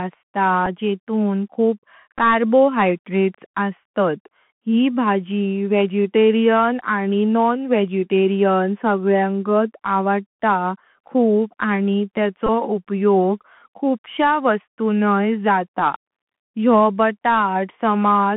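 The whole clip carries the sound of a Bluetooth CVSD headset codec. The speech is squeezed into a telephone band of roughly 150 Hz to 3.4 kHz. The codec tracks the waveform one bit at a time, stepping up or down, which fits 64 kbps CVSD. The damage is plainly audible. A grainy hiss sits under the speech. S sounds are scratchy. Loud, bright sounds outrun the step size and distort.

At 0.66 s, just before "जेतून खूप", comes a Bluetooth headset packet repeat. One voice packet was lost, so the decoder replayed the previous one. The result is a small tick. From 2.18 to 2.20 s, after "जेतून खूप", the gap is longer, about 7.5 ms. That points to two repeated packets. From 12.47 to 12.49 s, after "खूप आणि", about 19 ms is lost. This fits a run of five repeats. Each repeat comes every 3.75 ms, so the run makes a short buzz near 267 Hz.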